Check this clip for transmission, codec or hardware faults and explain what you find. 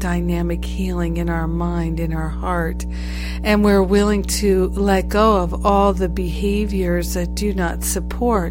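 There is one fault, a mains hum, and it runs through the whole speech clip from start to finish. A ground loop or a nearby transformer is letting the 60 Hz power line leak into the signal path, so a steady low tone sits under the speech only a few decibels below it, loud enough to be obvious in pauses. On a spectrogram it shows as an unbroken horizontal line at 60 Hz with fainter harmonics above. The waveform never settles to a flat line between phrases.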